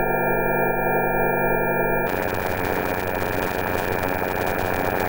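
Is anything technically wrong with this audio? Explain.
Yes. From 2.07 s to the end, a block size mismatch (padded) zero-fills each block, which fits 256-sample blocks, adding a 91.9 Hz buzz and slowing playback to 0.533x. Unlike resampling errors, timbre stays.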